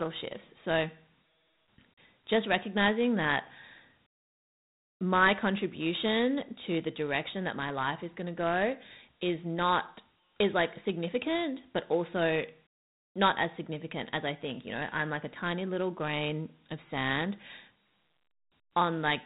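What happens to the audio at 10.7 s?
At 10.7 s you're hearing Dialogic VOX ADPCM, present across the whole clip. Coarse 4-bit step coding, consistent with a 32 kbps stream, leaves gritty hiss trailing the speech, with nothing above 3.8 kHz.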